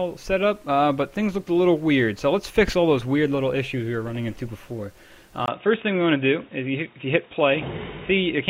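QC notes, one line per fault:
5.46–8.50 s, input switched to a poorer device: after a 20 ms gap the sound turns dull, nothing above 3.8 kHz, with faint new noise, likely a narrowband microphone.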